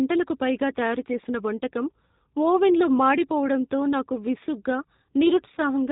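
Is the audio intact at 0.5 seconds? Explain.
No. G.729 coding runs through the whole clip, including 0.5 s. The speech is rebuilt from a vocal tract filter, a pitch predictor and a few pulses per frame, with nothing above 4 kHz. It sounds plainly rough, band-limited and synthetic, which fits an 8 kbit/s stream.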